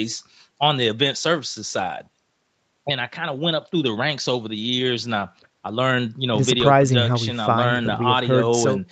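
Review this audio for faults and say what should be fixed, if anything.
No faults found; nothing here needs fixing.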